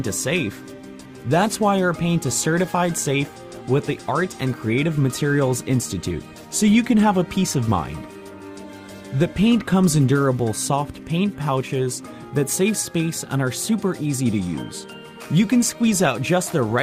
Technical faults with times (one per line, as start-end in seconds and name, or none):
none